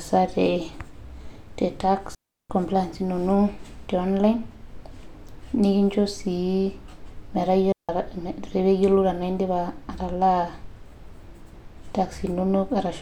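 At 2.15 s and 7.72 s the speech drops into clean near-silence for 350 ms and 170 ms: digital wireless dropouts, the receiver muting on lost data, with no noise bursts.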